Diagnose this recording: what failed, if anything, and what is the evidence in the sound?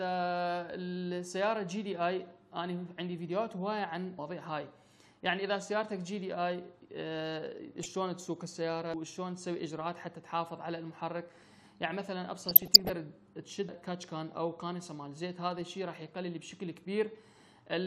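Audio missing between chunks, at the recording or buffering stage: the sound skips abruptly at 4.19 s, 8.94 s and 13.69 s, each time losing roughly a third of a second, with the two sides butted together and no silence between them. The even spacing most likely comes from a recorder writing 5-second chunks and dropping audio at each handover. On a waveform, each skip is a sudden step in level or shape at the splice. A spectrogram shows a hard vertical seam where the patterns on either side do not connect.

DAB burbling, in the codec stage of the broadcast reception chain: from 7.83 to 7.95 s a few watery blips, and more heavily from 12.38 to 12.92 s a bubbling, squelchy texture with small chirps, sit over the sound. Weak reception let bit errors through the error correction into the MP2 data. Corrupted samples put short blips of noise in single sub-bands. A spectrogram shows scattered rectangular patches, each one sub-band wide and one frame long, switching on and off.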